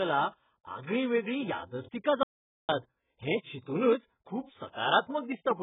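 A speech recording, likely squeezed through AAC-LC compression at a very low bitrate, consistent with around 8 kbps, so the codec has discarded everything above 3.8 kHz and coded the rest coarsely, leaving the voice dull, smeared and warbling with heavy artefacts throughout. From 2.23 to 2.69 s the input was likely lost while recording continued, producing an audio dropout to silence. The sound cuts off abruptly, leaving about 0.46 s of silence with no room tone, then resumes mid-flow.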